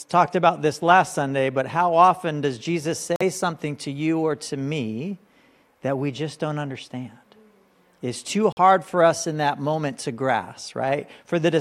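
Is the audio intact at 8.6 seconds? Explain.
No. A Bluetooth dropout runs from 8.52 to 8.58 s, right at that moment. The audio cuts to silence for about 60 ms and then returns mid-flow rather than picking up where it stopped, so roughly 46 ms of material is missing. That points to two frames lost over the wireless link, likely packets that reached the headphones too late and were discarded, leaving a hole.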